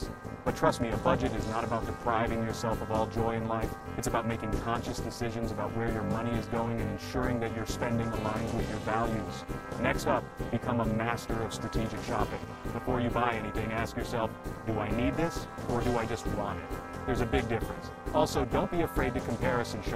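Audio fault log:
Throughout: overlap-add ripple. The sound was split into windowed frames and stitched back with an overlap that doesn't add up to a steady gain, so the level dips and swells once per frame, with a ripple depth of about 60 dB, which means it nearly drops out each cycle. With that happening at roughly 300 times a second, you don't hear it as a wobble but as a harsh, buzzy, robotic roughness laid over everything.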